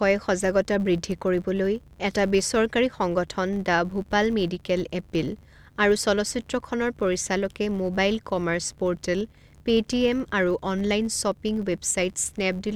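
From start to finish the speech carries a fault of the filter restarted on every block kind. The filter discards its stored state at each block boundary and begins again from silence, so every block opens with a small transient. These repeat at about 93.8 Hz, which fits a 512-sample block, and are heard as a steady buzz under the speech that rises and falls with the level of the signal.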